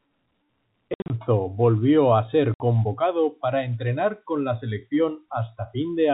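From 0.94 to 1.1 s and again at 2.54 s, packet loss filled with silence punches holes in the speech. The first event scatters about 120 ms of dropouts with runs up to 60 ms, and the second is a single 60 ms gap. The gaps fit 20 ms packets. On a waveform these are flat silent stretches with abrupt edges, and on a spectrogram they are blank vertical bands, with a thin broadband line at each edge from the hard edges. The surrounding band stops at 4 kHz under the telephone coding.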